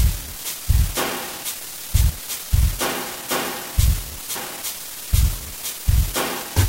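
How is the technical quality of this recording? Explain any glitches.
The recording has one recurring fault, damaged data in a compressed stream, heard as three brief glitches at 2.09 s, 4.34 s and 6.41 s. At each point part of the compressed data was corrupted, so the decoder misread those frames, lost its place and had to find the next valid frame header before continuing. Each disruption lasts under 20 ms and comes through as a short chirp or blip that breaks into the sound.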